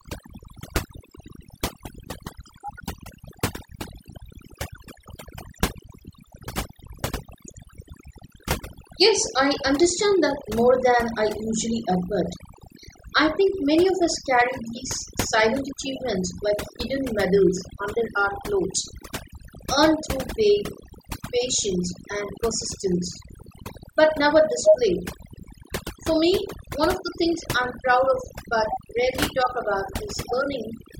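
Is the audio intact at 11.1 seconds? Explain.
No. At 11.1 seconds the speech is affected by overdone noise removal, which runs through the whole clip. The noise reducer was pushed so hard that any frequency band close to its noise estimate is pulled far down or shut off, taking the quieter parts of the voice with it. The background drops and breaks up into twinkling specks. A spectrogram shows a patchy, holed pattern with isolated bright dots in the gaps.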